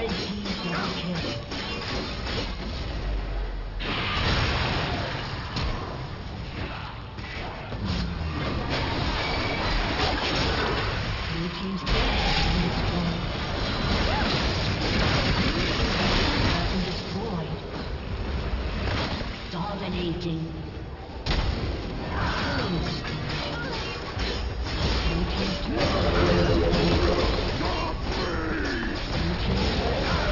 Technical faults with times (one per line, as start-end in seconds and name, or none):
0.00-30.32 aliasing